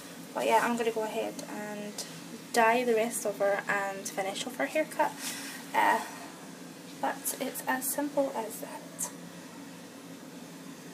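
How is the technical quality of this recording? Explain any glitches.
No glitches or technical faults can be heard anywhere here.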